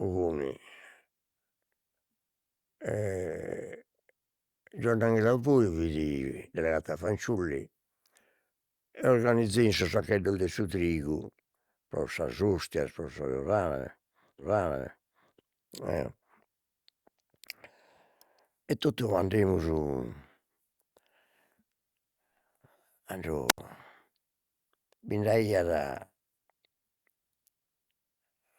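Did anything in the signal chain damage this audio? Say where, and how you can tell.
Yes. At 14.39 s the stream jumps back and the one second up to 15.39 s plays again: a stream segment repeated, a network or playback fault where the player queued the same segment twice. Unlike a buffer stutter, the replay is a full coherent second, not a tiny loop.

At 23.48 s a wireless microphone squelch dropout strikes the analogue radio link before conversion: a brief swell of hiss, then about 78 ms of near silence until 23.59 s. The hiss preceding the hole distinguishes it from a network packet gap.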